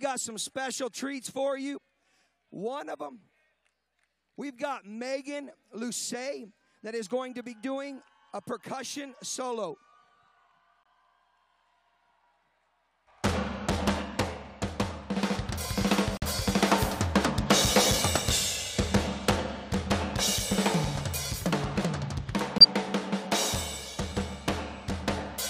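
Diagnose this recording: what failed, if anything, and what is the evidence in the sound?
Corrupt frame muted at the codec: sharp silent holes at 10.83–10.87, 16.17–16.24 and 22.58–22.64 s, timing intact. The decoder rejected damaged frames, so playback filled silence.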